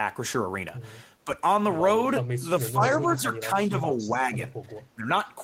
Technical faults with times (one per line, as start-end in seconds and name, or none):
2.39-4.37 speech suppressed in double talk
2.81-2.99 echo leak
3.98-4.10 echo leak
4.95-5.08 speech suppressed in double talk